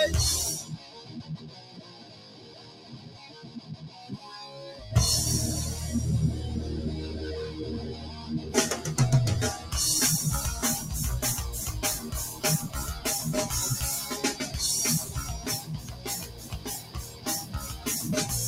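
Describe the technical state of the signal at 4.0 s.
A speech-oriented noise suppressor is running on this material, treating steady tones, ambience and decay as noise to be removed. Its gain keeps swinging by roughly 15 dB, so held sound sinks while onsets pass, leaving the signal pumping and thinned.

At 4.0 s the signal sits inside a stretch, from 0.63 to 4.3 s, where the noise suppressor cut this sound harder than the rest, dropping it by about 10 dB at its deepest. Sustained and fading parts lose level and their tails end early.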